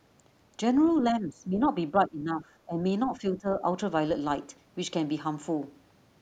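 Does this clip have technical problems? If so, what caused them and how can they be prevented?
Yes: speech suppressed in double talk. The echo canceller likely failed to separate this talker from loudspeaker echo while both sides spoke, so the speech dips at 1.02–1.73 s (by up to about 20 dB), 1.91–2.48 s, 2.65–2.79 s and 3.11–3.7 s. Using a headset, or a canceller with better double-talk detection, would prevent this.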